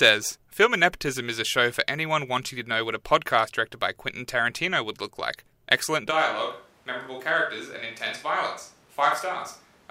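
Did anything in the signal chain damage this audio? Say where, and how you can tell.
Yes: at capture, a likely switch to a distant microphone at 6.12 s makes the speech suddenly roomy, hollow and bass-light to the end, about 5 dB quieter.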